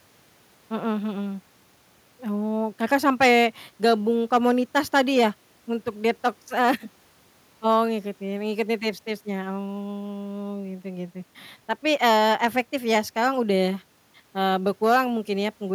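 No technical faults are audible.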